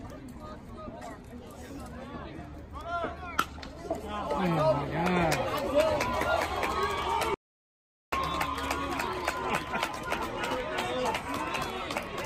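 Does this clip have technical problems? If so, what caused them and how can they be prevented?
Yes. An audio dropout to silence runs from 7.34 to 8.12 s. The sound cuts off, and the gap is silent with no room tone, losing about 0.78 s. The input was likely interrupted while the recorder kept writing zeros. Securing cables and monitoring the input during capture prevents this.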